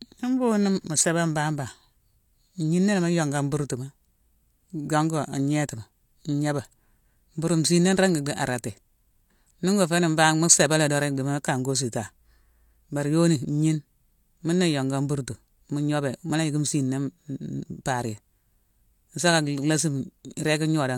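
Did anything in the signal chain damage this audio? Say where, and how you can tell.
Yes. Clock slip clicks run through the whole speech clip, from 0.11 s to 20.96 s, as a soft, even rattle about every 20 ms, some fifty per second and roughly a thousand in all. Each is a single-sample discontinuity. This likely comes at the converter stage, where two devices on independent clocks differ by roughly 0.1%, so a sample is dropped or repeated every time the drift reaches one sample. The strict regularity separates it from buffer underruns, which leave uneven gaps.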